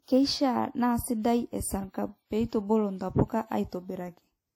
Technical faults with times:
0.00-4.55 transcoding between lossy codecs
0.16-4.53 clock slip clicks

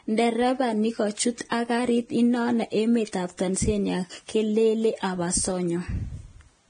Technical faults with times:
0.00-6.69 Vorbis compression
1.49-1.52 pre-echo

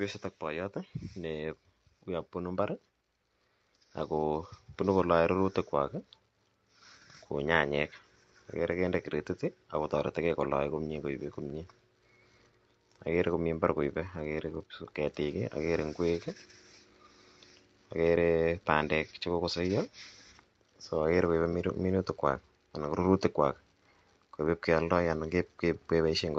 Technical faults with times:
0.39-16.04 automatic gain rising

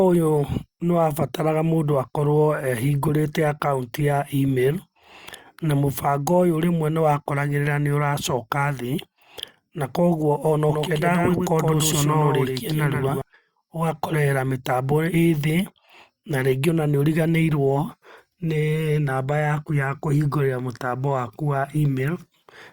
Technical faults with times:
10.70-13.22 doubled audio track

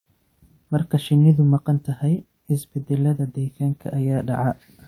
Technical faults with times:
none

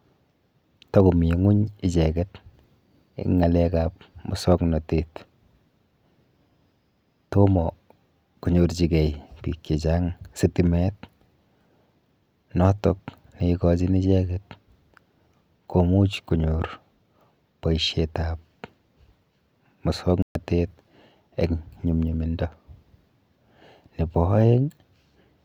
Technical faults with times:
20.22-20.35 block of digital silence

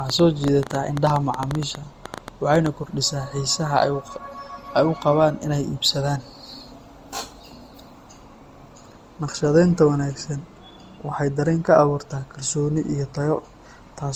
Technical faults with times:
0.00-14.15 generation loss
0.10-2.67 train of clicks

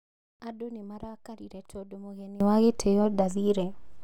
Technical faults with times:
0.00-2.40 one channel inverted

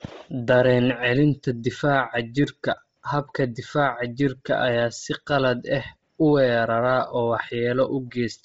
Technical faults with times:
0.00-8.44 Bluetooth LC3 compression

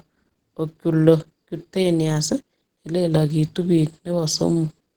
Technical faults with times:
0.00-4.96 Opus compression

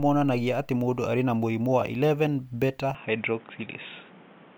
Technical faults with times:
2.95-4.58 input switched to a poorer device

